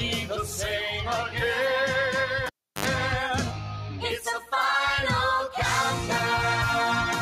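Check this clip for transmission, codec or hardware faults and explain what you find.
Two faults are present: a speech-tuned noise suppressor acting on the whole clip, and a cable pulled and plugged back in.

Noise suppressor applied to music or sounds runs from start to finish. The suppressor treats sustained, steady content and decay tails as background noise and pulls them down, while sharp onsets pass largely intact. Gain swings by roughly 5 dB, so held material sinks shortly after each attack and recovers on the next. The result is a pumping, fluttering quality with thinned-out tails and ambience.

Cable pulled and plugged in occurs between 2.46 and 2.86 s. A pop marks the disconnection, and the signal then drops to near silence for about 0.34 s as the live connector leaves the socket. While only the tip touches, before the ground does, a burst of 50 Hz mains buzz lasting about 71 ms comes through unshielded. 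A second pop follows as full contact is made and the sound returns.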